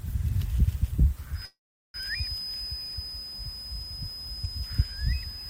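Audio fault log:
1.31–5.50 s, feedback whistle: the loudspeaker-to-microphone loop is likely poised right at the edge of feedback, so a single 5 kHz tone keeps ringing without building up. It sits as a thin, steady whistle roughly 10 dB below the sound, swelling and fading slowly in level, through to the end.
1.45–1.97 s, call audio freeze: packets were likely held up in transit and the jitter buffer ran dry. The last sound is dragged out as a fading buzz or hiss, then about 0.37 s of silence, before playback resumes exactly where it stopped. Nothing is lost, but everything afterwards plays about 0.49 s later.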